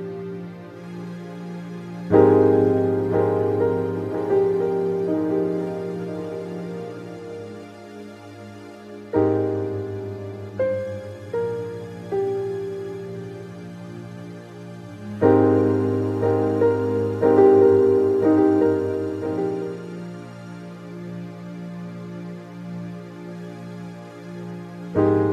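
Nothing technical goes wrong anywhere in this recording, so there's no fault to point to at any moment along the way.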